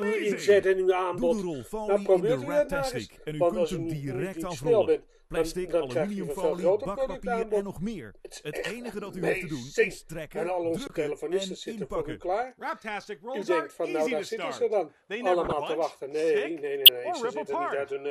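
At 10.87 s the sound freezes flat for about 23 ms, 1024 samples, and then resumes. This is an underrun with held sample: the output buffer ran dry, the converter held its last value, and roughly 20 ms of live audio was lost. From 15.45 to 15.53 s a moderate error peaking around -15 dBFS spans about three frames, and at 16.85 s a second, much stronger error spans about two. Both are corrupt frames decoded: flipped bits made the decoder put energy at the wrong frequencies.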